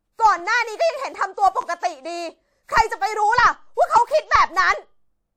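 At 1.61 to 1.64 s the speech briefly catches on a repeated buffer. New audio arrived late, so the playback device replayed the last block it had, an 11.6 ms slice (which fits a 512-sample buffer), two extra times. Each repeat joins with a hard edge, so it comes across as a quick buzzy stutter rather than a gap. Unlike a dropout, nothing goes silent and essentially no audio is lost; the sound just marks time before continuing.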